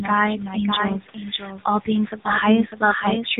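From start to finish, a doubled audio track runs under the speech: a second full-band copy, roughly 5 dB quieter, trails by about 0.7 s, likely from a slower capture path. On a waveform, every burst repeats as a fainter twin, with no decay tail.

The AMR narrowband mobile codec also runs throughout. Nothing passes above 3.9 kHz, so a spectrogram shows a flat ceiling there. The buzzy, synthetic texture points to the 7.95 kbit/s mode.

Speech cut by the noise suppressor comes at 0.38–0.57 s (down about 8 dB), 0.9–1.59 s (about 11 dB) and 2.12–2.27 s (about 10 dB). Those stretches sound swallowed, and their waveform envelope sags.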